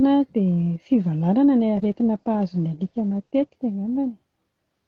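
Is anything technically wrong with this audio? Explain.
Yes. From 1.77 s to 3.65 s there is a call bitrate drop. The connection's bandwidth estimate fell, so the encoder was pushed from about 40 kbps down to 12 kbps and held near that floor for roughly 1.8 s. With so few bits, the speech is coded coarsely and the audio band shrinks from 20 kHz to 8 kHz. The voice turns muffled, rough and watery until the bitrate climbs back at about 3.65 s.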